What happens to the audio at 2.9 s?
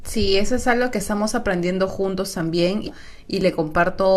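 Right around there, from 2.87 to 2.92 s, the speech jumps forward with a short blip, as if a chunk of the programme has simply been dropped out of the timeline. That's most likely a stream segment skipped: one piece of the segmented stream didn't load, so the player moved straight on to the next one and stitched across the gap. You hear the join as that quick discontinuity rather than any silence.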